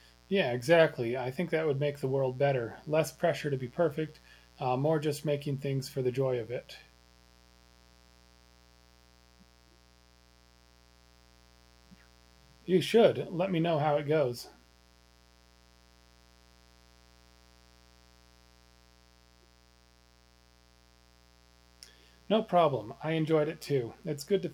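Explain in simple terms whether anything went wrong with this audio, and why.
A steady, raspy buzz sits quietly underneath the speech from start to finish. This is mains buzz: electrical noise from the 60 Hz power supply, with sharp spikes twice per cycle, leaking into the recording and adding a ladder of harsh overtones reaching into the kilohertz range.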